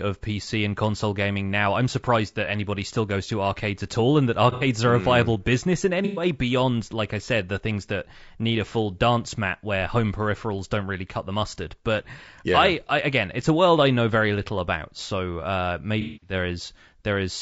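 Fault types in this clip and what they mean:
Low-delay AAC compression, throughout: The speech has plainly audible roughness and grain, with noise filling the gaps between pitch harmonics and an upper band that sounds thin and synthetic. The likely cause is AAC-ELD, the low-delay AAC used for video calls. It codes about 500 frequency lines a frame with a low-delay window. The damage fits a low rate of around 32 kbps.
AAC frame loss with concealment, 4.52 to 4.67 s, 6.05 to 6.25 s and 16.01 to 16.33 s: Coded frames went missing, and the decoder patched each gap by reusing and perturbing the last good spectrum. The result is smeared, noisy patches: after "at all and that", after "mm viable business in" before "beyond like I said", and after "little about so uh". The last gap runs about 210 ms.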